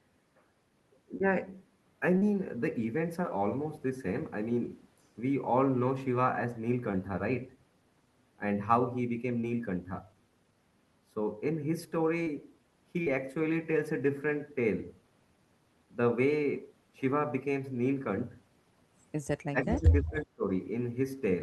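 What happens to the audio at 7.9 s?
Nothing goes wrong at 7.9 s: the speech passes through intact, with only the steady coding character and roughly 12 kHz bandwidth limit of the call path's Opus codec, which fits a rate of about 24 kbps.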